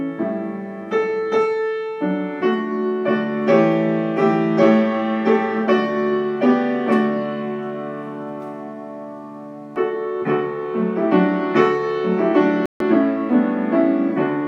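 A Bluetooth stall hits at 12.66 s and lasts to 12.82 s: the sound drops abruptly to silence for about 146 ms, then returns without any fade on either side. The likely cause is radio interference delaying packets on the wireless link, so the headphones' small playback buffer emptied and output halted until retransmitted data caught up. The hard edges and the brief, complete gap give it away.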